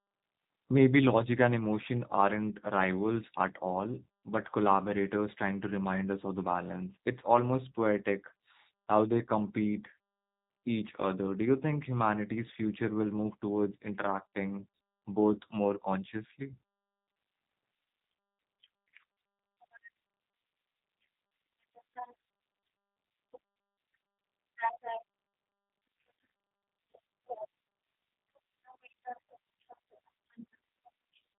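Throughout, the speech sounds rough and synthetic, with nothing above about 3.8 kHz. This is plainly audible G.729 codec damage: each 10 ms frame is rebuilt from a vocal-tract filter, pitch prediction and a few pulses, which fits an 8 kbit/s coder.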